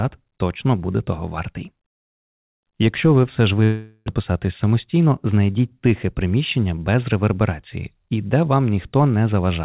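A long network dropout runs from 3.64 to 4.10 s, just after "ви все ж". Likely a lost stretch of packets: the receiver stretches the last sound into a fading buzz or hiss for the whole gap, and about 0.4 s of audio never returns. A jitter buffer speed-up follows from 4.71 to 5.34 s, just before "тихе приміщення без реверберації". The receiver trims short pitch-period pieces, about 50 ms in total, so the audio plays at 107% speed with unchanged pitch and sounds slightly hurried. The narrowband G.711 call path leaves nothing above 4 kHz.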